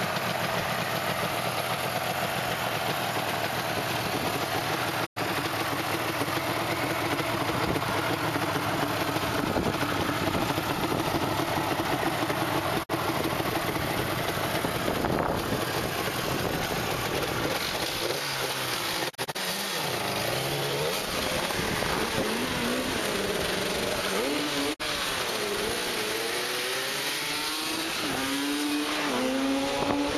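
There are digital broadcast dropouts at 5.05, 12.82, 19.09 to 19.37 (scattered short holes there) and 24.73 s. The receiver lost frames and muted, so the sound fades quickly to silence, then returns with that bit gone.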